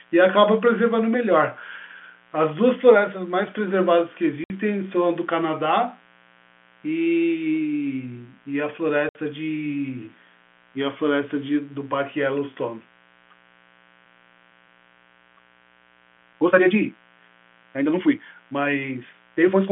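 A steady, raspy mains buzz runs under the speech from start to finish, sitting well below the speech level. It comes from sharp switching spikes leaking in from the 60 Hz supply, twice per cycle, whose harmonics climb into the kilohertz range through the narrow telephone band.

At 4.44 s and again at 9.09 s the speech drops out into dead silence for 60 ms, with hard edges. This is packet loss filled with silence. The receiver played nothing where audio went missing, and each gap fits two lost 30 ms packets.

From 13.26 s to the end, the pace suddenly jumps to 1.78 times normal speed while the pitch stays put, so the speech turns rushed. This is likely a time-stretched section, squeezed by software that kept the pitch by dropping short slices of audio.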